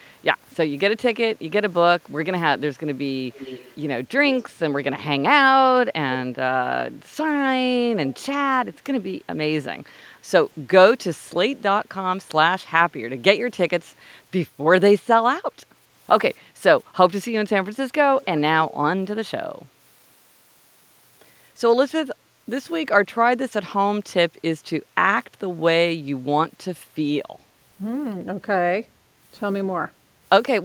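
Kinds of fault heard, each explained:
Echo leak: a faint copy of the speech trails it by 272 ms in five short scraps between 3.3 and 18.4 s, sitting about 15 to 35 dB below the speech. It is likely a loudspeaker's sound that an echo canceller failed to remove.
Background gated by the echo canceller: the room sound dips by up to about 8 dB for around 400 ms, from 9.84 to 10.23 s, then returns. The canceller turned the microphone down hard while the loudspeaker was playing.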